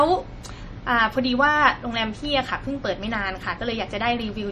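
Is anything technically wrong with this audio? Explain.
Yes. MP3 compression, likely, throughout: the speech has nothing above 13.4 kHz and plainly audible codec damage, with weak frequency lines dropped, which fits a bitrate around 40 kbps.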